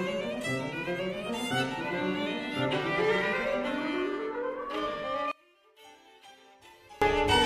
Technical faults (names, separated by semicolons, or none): one channel inverted